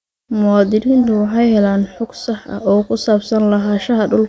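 No technical faults are audible anywhere in the speech recording.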